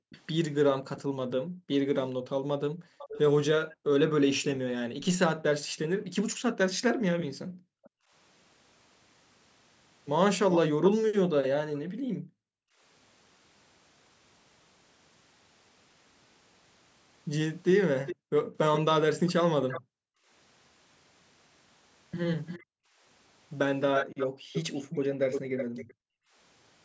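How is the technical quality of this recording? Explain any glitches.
The speech is compromised by two recurring call-path faults. The background keeps dropping out, and a delayed second copy of the speech trails behind. Nothing is heard above 8 kHz, which fits the call's microphone processing.

Background gated by the echo canceller occurs from 0.0 to 8.12 s, from 11.29 to 12.81 s, and from 18.16 to 26.35 s. The room sound dips by as much as about 40 dB, then returns. Within those spans the gaps add up to roughly three seconds, one and a half seconds, and two seconds. The canceller hears the loudspeaker playing and clamps the microphone down hard. Ambience vanishes with it, and the silence sounds unnaturally dead.

A quieter repeat of the speech follows behind it from 0.1 to 10.9 s. It lags by 468 ms and sits about 10 dB below the main speech. It returns from 18.06 to 25.94 s, now 347 ms late and louder, about 5 dB down. 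The likely cause is an echo leak. Someone's loudspeaker fed the microphone, and their echo canceller failed to strip it all. The residue travelled back as an audible echo.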